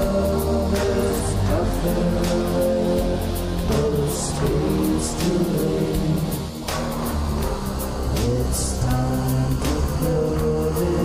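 At 8.50 s an underrun with held sample briefly flattens the waveform for about 0.36 ms, consistent with a 16-sample gap. Playback then resumes with essentially nothing lost.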